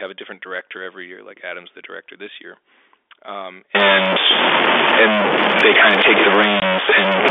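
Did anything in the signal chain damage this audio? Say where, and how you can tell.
Yes. From 3.75 s to the end of the clip, the speech turns distorted, and the pauses fill with a steady hiss that wasn't there before. The likely cause is a stuck bit at the converter or in the data wiring: one bit held fixed shifts roughly half the samples by its weight. On a waveform, small values are pushed off zero in a jagged pattern. On a spectrogram, broadband noise floods the gaps between syllables.

At 6.60 to 6.62 s, a 20 ms hole of digital silence cuts into the speech, with hard edges. This is packet loss filled with silence at the network stage, and its length fits a single lost 20 ms packet on the G.711 telephone link. On a waveform, it shows as a flat line with abrupt steps on either side. On a spectrogram, it is a thin, fully blank vertical stripe.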